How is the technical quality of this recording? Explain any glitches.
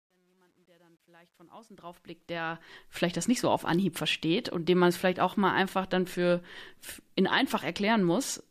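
The fade-in at the start carries a fault. From 0.0 to 2.95 s, as the speech rises from silence, the quietest part sounds gritty, worst from 0.0 to 1.91 s. This is truncation distortion on a fade. The gain stage drops low-order bits without dither, so near the bottom of the fade the waveform collapses into a few coarse square steps. The grain fits a path only about 10 bits deep.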